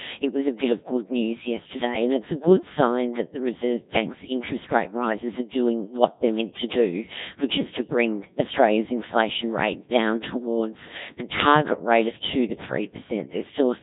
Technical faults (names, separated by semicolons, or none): Codec 2 vocoder